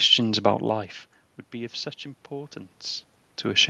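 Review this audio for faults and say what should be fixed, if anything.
No faults found; nothing here needs fixing.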